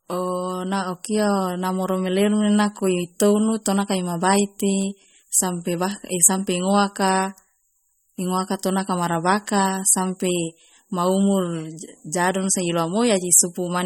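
Throughout, likely MP3 compression starved of bits, which fits 32 kbps, removes everything above 17.3 kHz and flickers weak lines, leaving the speech plainly watery.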